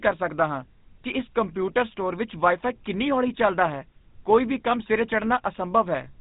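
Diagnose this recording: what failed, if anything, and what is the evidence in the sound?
The codec stage is what failed here: this speech has been through the GSM full-rate codec for the whole clip. You can hear a buzzy, gravelly roughness on every voiced stretch, and nothing gets through above about 3.8 kHz, which fits the old 13 kbps full-rate coder. It models the vocal tract as a filter and drives it with a coarse, regularly spaced pulse train, so the rasp is that pulse excitation showing through.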